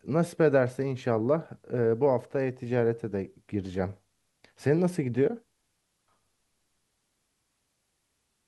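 Nothing goes wrong anywhere in this bit of speech; there's simply no technical fault to point to.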